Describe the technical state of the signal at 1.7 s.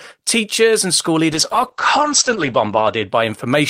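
At 1.7 s the speech is inside a call bitrate drop lasting from 1.32 s to 3.15 s, just after "teachers and school". The starved encoder codes coarsely, which fits a fall to about 10 kbps, and cuts content above 8 kHz, so the speech sounds rough and muffled.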